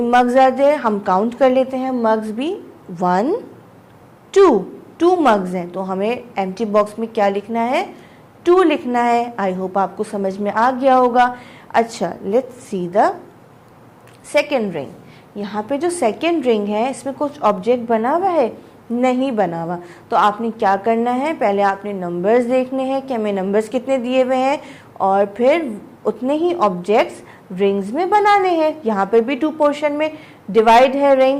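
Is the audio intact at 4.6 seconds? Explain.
Yes, the audio at 4.6 seconds is intact, with no dropout, click, distortion or other fault at that point.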